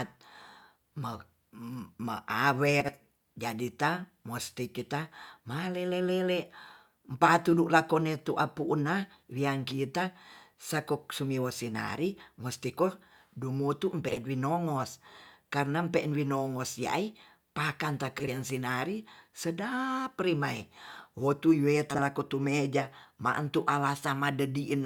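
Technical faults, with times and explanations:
2.80–2.92 s, 14.08–14.18 s, 18.19–18.29 s (after "ai pakan") and 21.90–21.99 s (before "lakotu meja ma'entu"), frames out of order: a brief garbled flutter, because two adjacent runs of about 40 ms were swapped.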